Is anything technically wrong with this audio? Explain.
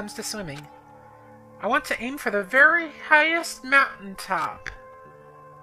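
Yes. From 2.30 s to the end, there is a time-stretched section. The pace abruptly drops to about 0.62 times normal speed, while the pitch stays where it was. The likely cause is software lengthening this stretch to fill a set duration. It keeps the pitch by repeating short slices of the audio. As a result, the slowed sound has a dragging quality.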